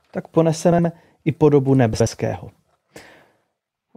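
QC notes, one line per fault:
0.72–0.85 s, frames out of order: a brief garbled flutter, just before "i podobu", as two adjacent 64 ms blocks play swapped.
1.94–2.07 s, frames out of order: the same flutter right after "i podobu"; two 64 ms blocks were decoded in reversed order, losing no time.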